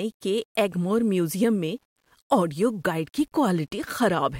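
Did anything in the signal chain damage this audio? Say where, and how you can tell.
Yes. Throughout the speech, quiet passages turn gritty and the softest tails sputter, which fits low bit depth without dither at roughly 10 bits, likely from a sample-format conversion that rounded. The error sits about 45 dB down, tracking the signal; waveforms show visible steps, spectrograms signal-dependent hash.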